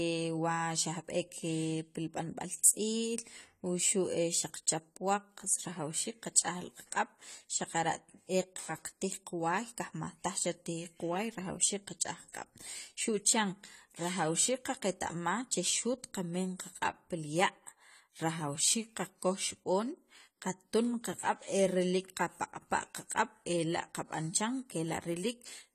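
From start to finish, the speech carries plainly audible AAC compression damage, most likely from an AAC-LC encode at a low rate, something around 32 kbps by the sound of it. Nothing survives above 14.1 kHz, so the top end is shaved off and the voice sounds dull. With so few bits per frame, the encoder quantises coarsely and starves some bands, which leaves a smeared, warbly texture, especially on sibilants and held vowels.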